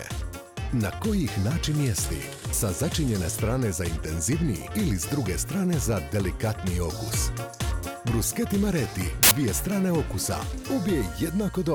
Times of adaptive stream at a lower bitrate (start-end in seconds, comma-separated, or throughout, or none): none